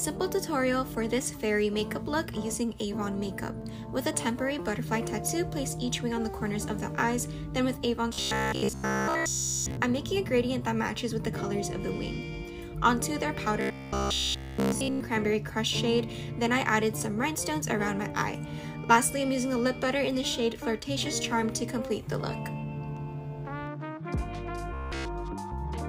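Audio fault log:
8.13–9.77 s, 13.61–15.00 s, 24.74–25.05 s: robotic sound from repeated short buffers. A rigid metallic buzz at 66.7 Hz, which fits a 15 ms fragment looped in place of all the real sound, likely from audio arriving too seldom. On a spectrogram this appears as evenly spaced harmonic stripes, and the waveform shows identical repeating cycles.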